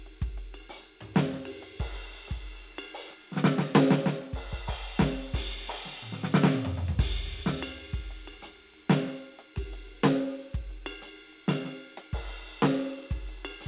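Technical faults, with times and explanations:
No technical faults detected.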